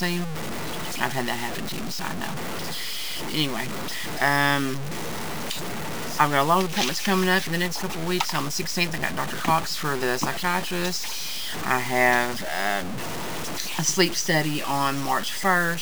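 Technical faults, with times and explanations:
throughout, low bit depth without dither: grainy, rasping distortion rides on every sound and fades out with it, with the error only about 10 dB below the signal. This likely comes from truncating to 5 bits, unlike dithered reduction, which leaves a steady hiss.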